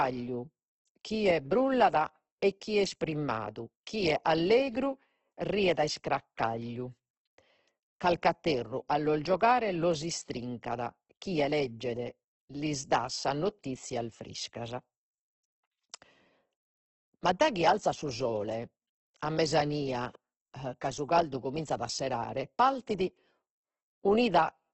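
From start to end the speech carries heavy Opus compression damage, likely from encoding in its music (CELT) mode at a rate that fits roughly 12 kbps. Nothing survives above 8.2 kHz, so the sound is held to wideband. With so few bits, the encoder keeps each band's energy but fills the detail with folded or noise content, so voiced tones sound rough, grainy and hissy. Unlike MP3, it leaves fewer of the swirling, watery holes between harmonics.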